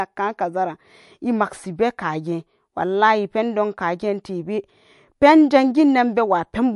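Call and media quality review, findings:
Watery, swirly speech with metallic chirps on s sounds, treble gone above 11.3 kHz, throughout. Likely MP3 compression at a low bitrate, cutting highs and dropping weak frequency lines frame to frame.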